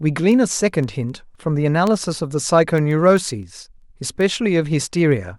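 A digital link is being read by a device running on its own clock, not locked to the sender and off by something like 150 ppm, so one sample slips at each clock crossing. From 0.19 to 5.38 s, these word clock ticks sound as around forty sharp clicks of uneven strength, roughly every 0.15 s, throughout the speech.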